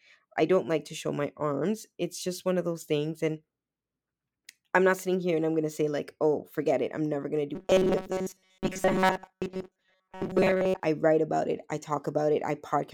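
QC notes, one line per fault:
7.55–10.83 s, robotic sound from repeated short buffers: the speech turns into a rigid, metallic buzz fixed at 188 Hz that still roughly tracks the syllables. The likely cause is audio arriving too slowly, so playback fills the gaps by looping the most recent fragment while fresh material is dropped. A 188 Hz buzz fits a loop of about 5.3 ms, and roughly 70 percent of the span is repeated material rather than new audio.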